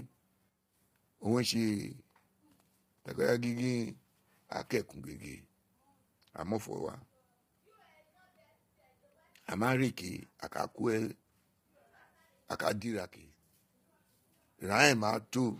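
Speech, heavily damaged throughout by what is likely low-delay AAC compression (AAC-ELD): the voice sounds rough and grainy, consistent with a rate near 24 kbps, and a spectrogram shows smeared, poorly separated harmonics with noise filling the gaps and a thin, synthetic-looking top band. At 0.49 to 0.75 s and 12.82 to 13.38 s, one channel drops out, likely a lost stereo channel: the level falls abruptly by about 6 dB, seen as sudden steps down in the waveform envelope.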